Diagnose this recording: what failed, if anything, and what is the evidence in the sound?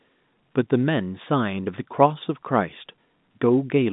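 Nothing failed in this recording, and the sound gives no evidence of a fault at any stage.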